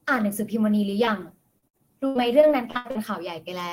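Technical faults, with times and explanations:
1.05–1.09 s, short concealed packet loss: about 20 ms of audio never arrived, and the receiver extended the preceding sound for roughly 13 ms before fading back in. It is heard as a brief smear. A spectrogram shows a thin vertical seam.
1.59–2.97 s, repeated packet loss (robotic sound): nine separate holes, the longest 81 ms, were each patched by continuing the last sound, covering about a quarter of this stretch. The result is choppy, with pieces missing. The waveform shows repeated, looped-looking segments, and the spectrogram shows smeared, frozen stretches.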